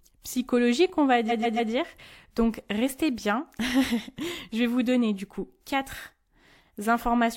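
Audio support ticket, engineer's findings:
Repeated frames, 1.28 to 1.70 s, right after "psychologique on va". Stutter. One 139 ms block plays three extra times. Adds 418 ms to the audio. Probable fault in the writer or transport stage. The block length fits a short run of compressed frames.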